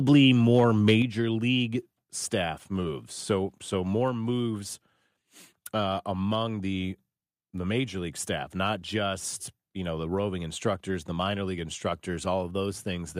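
A speech clip with two faults near the start. From 0.54 to 0.94 s, just before "league staff moves", the loudest peaks are flattened and crackle harshly. That is microphone overload, likely from input gain set about 4 dB too hot. Roughly one or two percent of samples are clipped. At 1.02 s, again just before "league staff moves", voice and background drop together by about 6 dB in a single step. This is the microphone volume stepped down, likely by call software reacting to the distortion.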